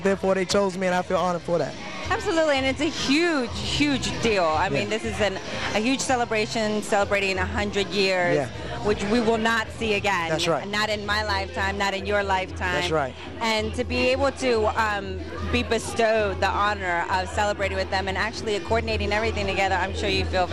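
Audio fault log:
Throughout: MP2 compression, likely from Layer II coding at a low rate, near 80 kbps. Upper sub-bands flicker off, leaving a dull, gurgling, granular texture. Unlike a steady low-pass filter or MP3 swirl, the treble drops out and returns unevenly across the 32 bands.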